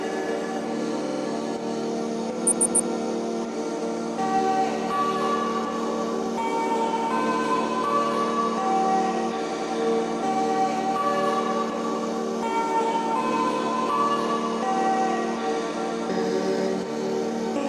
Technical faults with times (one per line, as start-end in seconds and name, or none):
1.02-1.22 repeated frames
2.46-2.88 repeated frames
9.48-9.66 repeated frames